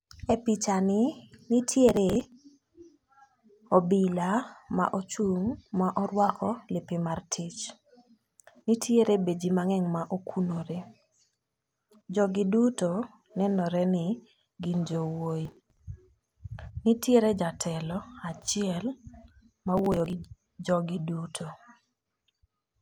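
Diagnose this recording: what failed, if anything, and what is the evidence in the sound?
Processor overload crackle at the driver or buffer stage: bursts of gritty crackle over the speech at 1.88–2.32 s, 15.45–15.77 s and 19.78–20.13 s. Buffers of around 10 ms repeatedly missed their deadlines and were skipped, leaving rapid hard-edged gaps.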